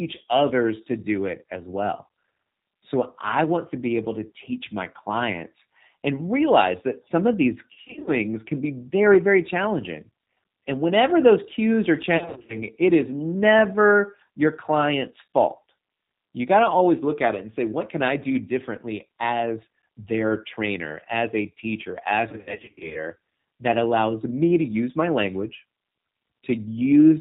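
G.729 coding runs through the whole recording. The codec rebuilds this speech at 8 kbit/s from a vocal tract filter, a pitch predictor and a few pulses per subframe. Anything above 4 kHz is gone, so the sound is muffled at the top. The damage is plainly audible as a rough, slightly synthetic texture on every syllable.

VoIP packet loss concealed by the speech codec appears three times: 7.73 to 8.11 s, 12.17 to 12.63 s, and 22.29 to 22.99 s. In each stretch, packets went missing in short bursts, with the longest gaps lasting 50 to 60 ms. The decoder filled them by extending the last pitch and filter with falling gain, which is why the sound turns into a stretched tone or noise that fades. It also stays weak for a moment after each gap, because every frame is built on the one before. The third episode is the longest, covering 0.66 s, and the sound there points to roughly 380 ms of missing audio.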